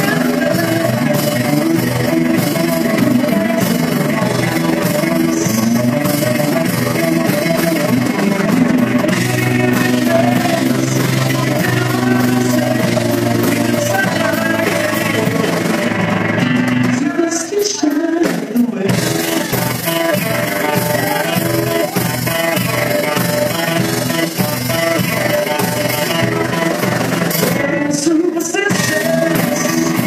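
Overlap-add ripple runs through the whole clip. The audio was split into windowed frames and rejoined with an overlap that doesn't sum to steady gain. The level dips by about 6 dB once per frame, around 20 times a second. It sounds like a fast, rough flutter.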